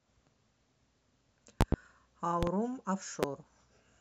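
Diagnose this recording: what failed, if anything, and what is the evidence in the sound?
Loud pops land on the speech: a pair at 1.61–1.76 s, another pair at 2.43–2.51 s, one at 3.23–3.26 s, peaking about 20–25 dB above it. They're tall waveform spikes and full-height spectrogram stripes, likely voltage steps from a loose plug or switch in analogue wiring.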